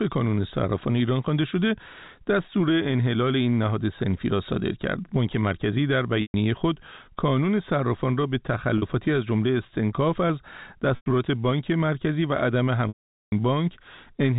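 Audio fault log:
4.31 s, audio missing between chunks: a sudden skip where about 10 ms of sound vanishes and the two sides are butted together with no pause, so the audio jumps forward. This is likely from processing in 6 s chunks and dropping a sliver at each changeover.
6.22–6.34 s, 8.78–8.82 s, 10.96–11.06 s, 12.88–13.32 s, packet loss with pitch repetition: the 40 ms gap sounds like a briefly held buzzy tone. The 100 ms, 120 ms and 440 ms gaps fade to silence before speech cross-fades back. The receiver filled each lost stretch by repeating the last pitch period, fading it out over about 50 ms.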